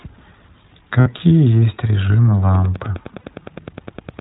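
The whole clip is speech with the iLBC codec in its path, and the damage is plainly audible. Everything above 4 kHz is gone, so sibilants lose their edge, and there's the slightly rough, synthetic grain you get when each frame's excitation is coded on its own. The frame rhythm and texture point to 20 ms frames at around 15.2 kbps.

First dropout, lost iLBC frames, runs from 1.00 to 1.07 s, about 60 ms, which fits three missing 20 ms frames. The decoder papers over the hole by repeating the last pitch cycle with some noise mixed in, so you hear a brief held, faintly buzzy vowel. Because each iLBC frame stands alone, the speech snaps back straight after.

From 2.52 s to the end there's Wi-Fi interference. A nearby radio's beacon is getting rectified by the audio circuit, giving a steady tick every 102.4 ms, roughly ten a second, sitting around 20 dB under the speech. It comes from the radio's transmit pulses leaking into the analogue side rather than anything the codec did.

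Then, while that ticking is still going, a second lot of lost iLBC frames hits from 3.20 to 3.24 s, about 40 ms, consistent with two frames. It's the same concealment: a short smeared, breathy hold of the previous pitch cycle, and the speech recovers almost immediately.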